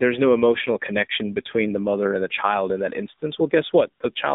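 From start to finish the speech carries AMR narrowband mobile codec damage, plainly audible. The band runs from about 200 Hz to 3.7 kHz, so nothing airy or bright survives above it. The codec rebuilds the voice from a vocal tract model fed by sparse pulses. Here the pulse budget is thin, which fits a low rate near 7.4 kbps. The result sounds buzzy and synthetic, with a flat, boxed-in tone.

From 2.28 to 2.39 s, between "the mother and the" and "in that", AMR bit errors break in. Weakly protected bits in the frames arrived flipped while the core check still passed. The length suggests about five 20 ms frames were affected, with roughly one bit in twenty wrong. Pulses fall in the wrong spots and fine gain and spectrum values drift. Pitch and level hold roughly steady, but the sound turns hoarse, scratchy and gargly.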